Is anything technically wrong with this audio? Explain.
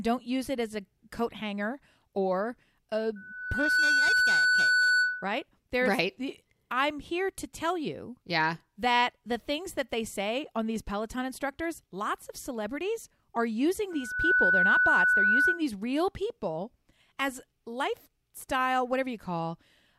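Yes. Loudspeaker feedback squeal occurs twice in this speech clip, from 3.16 to 5.44 s and from 13.90 to 15.62 s. A microphone is picking up the loudspeaker it feeds, and at 1.5 kHz the loop gain exceeds one, so that frequency regenerates on itself. Each time a steady 1.5 kHz tone swells up, over most of a second in the first event and about half a second in the second. It then sits a few dB above the speech the first time and around 10 dB above it the second.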